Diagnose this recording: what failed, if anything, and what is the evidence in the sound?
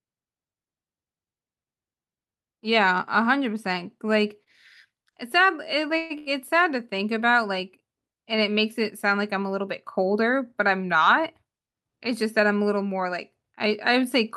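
Two short stalls from a late packet occur at the network and jitter-buffer stage: at 4.43 to 4.48 s the last sound is held for 29 ms, and at 6.18 to 6.28 s for 80 ms. Each time the buffer ran dry, the receiver stretched the previous sound, then resumed where it stopped, with nothing lost.

A call audio freeze runs from 5.97 to 6.12 s. The last sound continues for about 130 ms as a fading buzz or hiss, never reaching silence, and the speech then picks up where it paused. The likely cause is packets held up in transit, emptying the jitter buffer and inserting a gap.

A jitter buffer speed-up follows from 11.02 to 12.41 s. The speech runs at 109% speed while keeping its pitch, sounding hurried. The buffer had overfilled, so the receiver trimmed repeated pitch-period slices, roughly 150 ms in total, to pull the delay back down.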